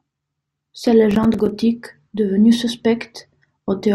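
From 1.11 to 1.49 s there's processor overload crackle: around ten buffers of about 5 ms each missed their deadlines, leaving tiny silent gaps that tear the speech into gritty crackle.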